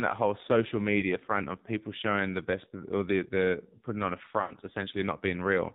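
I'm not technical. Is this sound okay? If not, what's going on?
No. The whole clip has passed through the AMR narrowband mobile codec, the compression used for older mobile phone calls. Everything above 4 kHz is gone and, because very little data was spent, the voice sounds buzzy and synthetic, not just muffled as a simple bass-heavy recording would.

There are also lost AMR speech frames, where bits of the call arrived damaged and the phone filled in the gap. Between "that whole social" and "front of people showing", at about 1.0 to 1.15 s, there's a brief warbly dip, which fits one lost piece. After "the putting on a", at about 4.42 to 4.54 s, a longer gap stretches the sound out and it fades away. Unlike a clean cut, the sound smears before it disappears.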